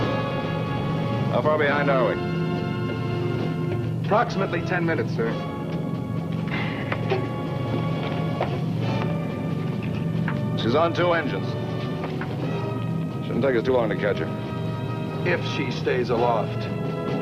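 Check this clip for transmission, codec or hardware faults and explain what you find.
There's one fault, right at the start. From 0.0 to about 1.05 s you get overlap-add ripple. The audio was chopped into windowed frames and stitched back with an overlap that doesn't sum to a constant gain, so the level swings by about 6 dB once per frame, around 300 times a second. With frames that short, it comes across as a metallic buzz with extra tones riding alongside the sound.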